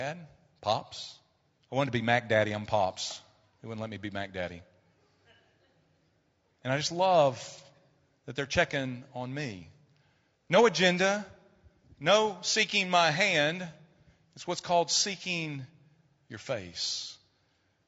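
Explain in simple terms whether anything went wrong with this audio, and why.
The speech sounds rough and grainy from start to finish. There is a hiss between the tones of the voice, and the top end sounds thin. This is likely low-delay AAC compression, used in video calls. Its short frames capture voices poorly.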